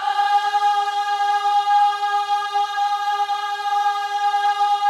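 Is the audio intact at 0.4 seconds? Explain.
Yes, the audio is intact at 0.4 seconds, with no dropout, click, distortion or other fault audible at that moment.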